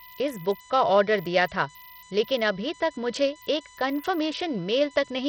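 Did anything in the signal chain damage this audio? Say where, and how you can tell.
Yes. In the analogue power or ground wiring there is USB whine throughout: a steady 1 kHz tone with harmonics peaking near 14 kHz, about 20 dB below the speech. Its kilohertz pitch separates it from mains hum.

At the codec stage, heavy gritty grain and flickering treble throughout point, likely, to Bluetooth SBC compression with a starved bit allocation consistent with roughly 64 kbps. The coarse, band-wide quantisation distinguishes it from smoother perceptual codecs.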